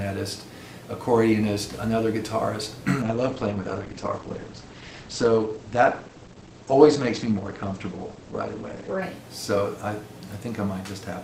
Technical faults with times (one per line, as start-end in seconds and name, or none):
3.02-9.02 adaptive stream at a lower bitrate